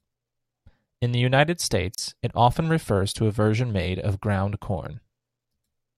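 A gap at a join of encoded pieces sits at 1.95 to 1.98 s in this speech clip: about 33 ms of silence with smeared edges, just before "it often refers to". Two separately encoded sections were joined untrimmed, so encoder delay and end-frame padding remained between them.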